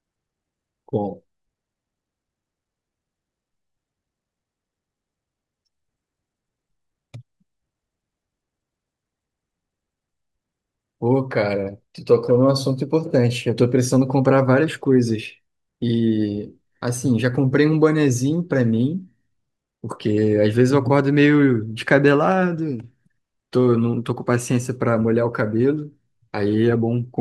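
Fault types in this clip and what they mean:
No technical faults can be heard anywhere in this speech recording. There is nothing to list for it.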